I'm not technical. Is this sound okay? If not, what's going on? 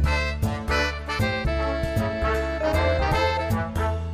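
Yes, this sound is okay, and nothing is going wrong in it.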